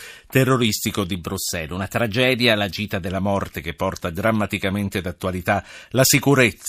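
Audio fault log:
1.16–3.08 s, drift correction step: the speech abruptly plays about 6% fast and sits 103 cents (roughly a semitone) sharp for nearly two seconds, then snaps straight back to normal rate. Speed and pitch jump together in one step. This is likely clock-matching software changing its playback rate once to drain or refill a buffer. Wow or flutter would waver gradually, and a pitch-only shift would leave the timing untouched.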